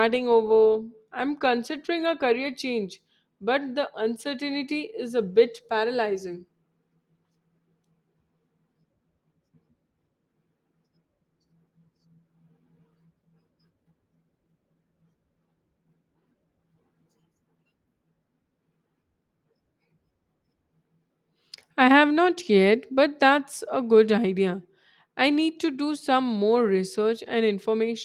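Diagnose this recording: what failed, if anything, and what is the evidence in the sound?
Nothing failed; no fault is audible here.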